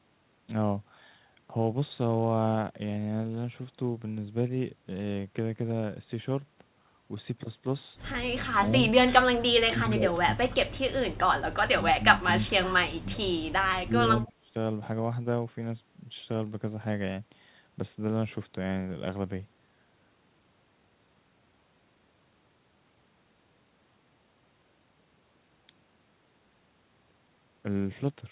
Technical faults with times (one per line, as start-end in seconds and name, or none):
8.56-8.83 speech suppressed in double talk
9.49-10.78 speech suppressed in double talk
11.70-13.21 speech suppressed in double talk
13.85-14.56 speech suppressed in double talk
14.28-14.32 echo leak